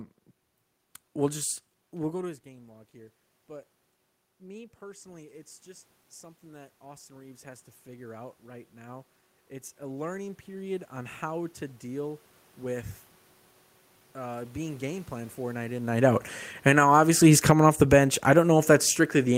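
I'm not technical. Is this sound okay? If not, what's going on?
No. Automatic gain rising runs from 2.05 to 12.96 s, after "we'll just": the speaker got quieter, so the level control slowly turned the voice and room noise up together. It rises again, briefly, from 16.88 to 18.45 s.

Automatic gain falling starts at 15.89 s, after "plan for night in", and lasts to the end: the sound was too loud, or its background too strong, for the control, so it gradually turned everything down.

Both follow the speaker moving relative to the microphone, around 2 s and 16 s.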